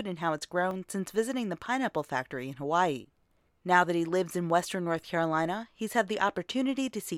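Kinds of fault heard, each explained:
Dropped buffer (overrun): a jump in the sound at 0.71 s, between "and how it's" and "since visiting the pineapple", likely from a few milliseconds skipped outright, with no silent gap as a dropout would leave.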